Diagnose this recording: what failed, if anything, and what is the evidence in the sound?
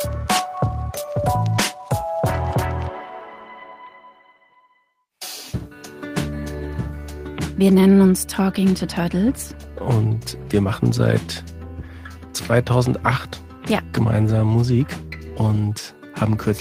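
Nothing failed at any stage: the signal holds steady in level, continuity and timing throughout, with nothing audible to point to a problem anywhere between capture and playback.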